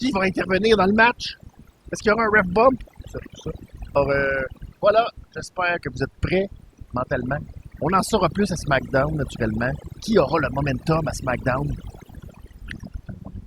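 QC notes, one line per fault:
Throughout: overdone noise removal. The noise reducer is set too aggressively, so individual frequency bands close to its noise estimate are pulled far down or muted, taking low-level speech detail with them. Background drops and breaks up into twinkling specks.
3.95 s: damaged data in a compressed stream. A corrupted stretch of the encoded stream makes the decoder misread or reject the affected frame and lose sync until it finds the next valid header. The result is a very short chirp or blip in the speech, lasting about 16 ms.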